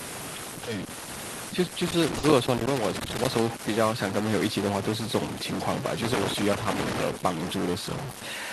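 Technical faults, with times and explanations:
Throughout: stuck bit. A distortion rides on the speech for the whole clip, and the pauses are filled with a steady gritty noise rather than silence. This likely comes from one data bit held at a fixed value, so about half the samples land off by that bit's weight. On a waveform the trace looks stepped and offset in a pattern that follows the signal. A spectrogram shows added noise over the speech and a raised noise floor between phrases.
1.86–3.40 s and 6.02–7.03 s: loose connector crackle. Two irregular bursts of scratchy crackle, lasting about 1.5 s and 1.0 s, break up the speech. A worn or dirty contact is rapidly making and breaking, which chops the signal, and any DC on the line turns each break into a pop. On a waveform these spans show ragged dropouts and sharp spikes. A spectrogram shows scattered vertical broadband streaks at uneven spacing.
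2.18–2.24 s: short stall from a late packet. For about 50 ms the sound is held and stretched instead of moving on, with a slight buzz or dip, and then the speech resumes from the same point with nothing skipped. A packet arrived late, the jitter buffer ran dry, and the receiver extended the last sound to fill the gap. This pushes the rest of the audio about 50 ms later. A spectrogram shows a brief flat, smeared band with repeated texture. On a waveform the same stretch looks like a looped segment.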